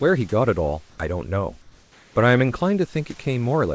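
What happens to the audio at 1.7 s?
At 1.7 s the room background goes flat: from 1.62 to 2.16 s, about 540 ms, the natural, detailed noise gives way to a steady, featureless hiss about 3 dB quieter than the surrounding background, which itself sits some 33 dB below the loudest sound. This is likely comfort noise in place of the background. The sending side stopped transmitting during the pause, and the receiver filled the gap with synthetic noise roughly matched to the room's spectrum.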